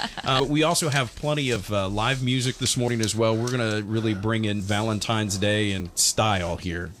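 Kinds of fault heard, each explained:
Dropped buffer (overrun): five skips, each a sudden jump where a chunk of sound just vanishes with no gap. The first, near 0.4 s, loses roughly 70 ms; the others at 1.56, 2.88, 4.6 and 5.8 s lose about 40 ms each, likely samples overwritten before being read.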